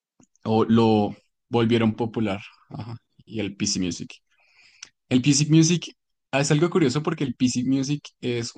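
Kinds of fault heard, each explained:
No technical faults can be heard in this speech recording. There is nothing to list or explain under any kind of fault.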